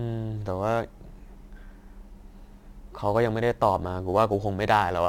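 Throughout the speech runs a crude rate conversion: a gritty, inharmonic fizz roughly 30 dB below the speech, riding on loud and bright sounds. Unlike harmonic clipping distortion, its tones are unrelated to the pitch, which fits nearest-sample repetition converting 44.1 kHz to 48 kHz.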